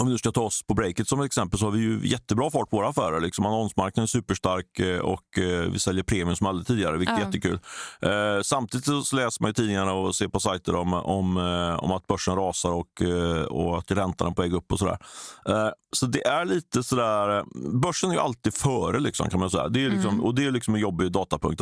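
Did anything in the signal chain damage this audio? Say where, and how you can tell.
No, nothing in this speech recording stood out as damage from any stage of the chain on listening.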